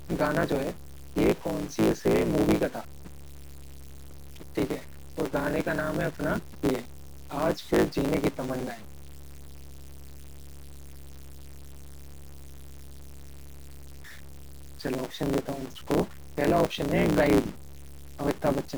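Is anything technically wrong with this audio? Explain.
Yes, three faults run through the whole speech clip.

Video or display buzz, throughout: a screen or video cable is leaking into the audio path, leaving a steady 60 Hz buzz at the picture's field rate with hash riding above it, sitting about 40 dB below the speech.

Low bit depth without dither, throughout: the speech turns gritty and grainy, with distortion that tracks the signal and sits roughly 20 dB down. The likely cause is truncation to very few bits with no dither, which fits around 6 bits.

Block size mismatch (truncated), throughout: one stage writes longer blocks than the next reads and the tail of each is discarded, which fits 512-sample blocks. This produces a 109 Hz buzz at the block rate, and the speech runs 1.16 times fast with its timbre intact.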